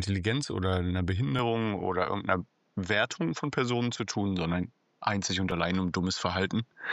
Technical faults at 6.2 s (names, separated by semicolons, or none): input switched to a poorer device